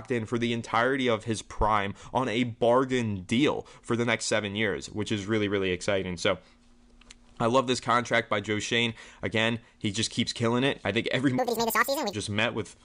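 Speech, and from 11.38 to 12.13 s there's a wrong sample rate: it runs twice as fast and an octave high, which fits 22 kHz audio played back at 44.1 kHz.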